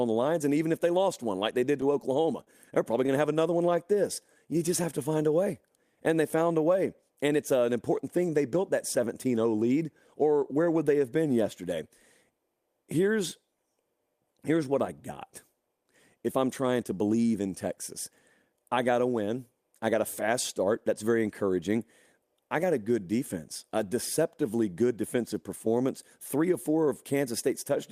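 Speech, with three network-playback faults in the first eight seconds. Between 1.39 and 2.49 s, after "if they lost one" and before "they're probably", the sound stays clear but picks up a handful of tiny ticks and brief smears, around seven of them. These are scattered short gaps: individual packets arrived too late or not at all, and the receiver bridged each hole by extending the preceding sound. Together the patches fill roughly 70 ms, none longer than about 30 ms, and nothing is lost outright. From 3.29 to 4.69 s, after "to have" and leading into "have to find a", the audio drags slightly while the pitch stays the same. Sounds are drawn out, at about 95% of normal speed. This is a jitter buffer slow-down. With its reserve running short, the receiver repeated single pitch periods and pieces of pauses over and over, adding 82 ms to build the buffer back up. Then from 7.02 to 7.39 s, after "they found a way" and before "uh an important thing", the speech briefly hurries forward at roughly 114% speed with its pitch unchanged. 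That is a jitter buffer speed-up. The buffer had collected more audio than its target, so the receiver trimmed short slices of one or a few pitch periods in quick succession, removing around 70 ms to bring the delay back down.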